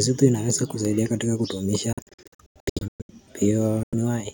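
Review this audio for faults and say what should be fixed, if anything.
Bluetooth dropouts in the speech occur at 1.93–3.11 s, where about 720 ms of silent gaps are scattered over 1.16 s (longest 116 ms), and at 3.83–3.95 s (93 ms). The likely cause is late wireless packets being discarded, and the speech resumes as though it had continued underneath. Monitor or capture over a wired connection, or reduce wireless distance and interference.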